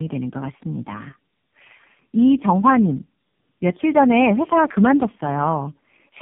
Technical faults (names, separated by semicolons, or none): tandem speech coding